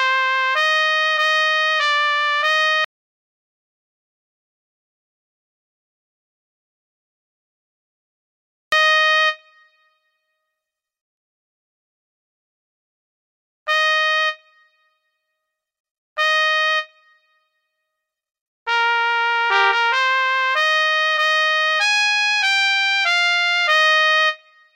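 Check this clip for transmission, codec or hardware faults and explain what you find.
One fault is present. Audio dropout to silence, 2.85 to 8.72 s: the input was likely lost while writing continued, leaving 5.88 s of total silence without room tone.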